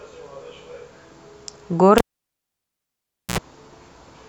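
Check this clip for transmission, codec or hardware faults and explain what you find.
One hardware fault: a cable pulled and plugged in, from 1.98 to 3.38 s. A pop opens a gap of about 1.35 s of near silence. As the plug is reseated, the bare tip briefly picks up 60 Hz mains buzz for 70 ms, then a second pop restores the speech.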